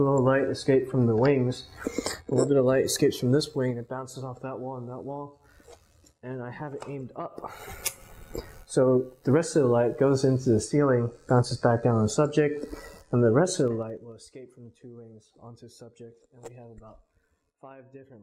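Level changes are applied in coarse, unsmoothed steps of about 3 dB, producing zipper noise twice. Each jump puts a small click in the audio, so a ticking, zipping texture rides on the sound while it drops. From 3.33 to 4.01 s it falls roughly 15 dB at around seven steps a second. From 13.57 to 14.17 s it falls roughly 25 dB with faster ticking, around fifteen steps a second.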